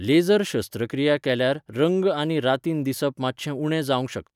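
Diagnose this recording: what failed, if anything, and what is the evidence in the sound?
Nothing failed; no fault is audible in this recording.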